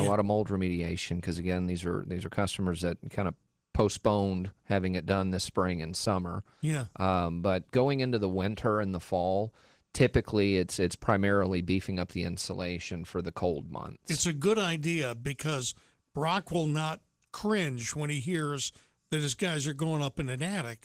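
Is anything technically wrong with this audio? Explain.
Yes. Opus voice compression is plainly audible across the whole speech clip. The sound points to a low bitrate around 16 kbps in hybrid mode, with linear-prediction coding below 8 kHz and a transform layer covering the upper band, so the full bandwidth is kept. At this rate the excitation is quantised coarsely in short frames, consistent with 20 ms, which makes the speech sound hoarse and slightly robotic.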